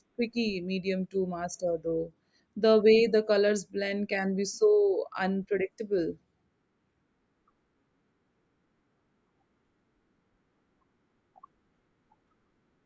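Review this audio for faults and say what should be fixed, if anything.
Nothing in the speech recording needs fixing. No technical fault can be heard anywhere in it, so there is nothing to repair or prevent.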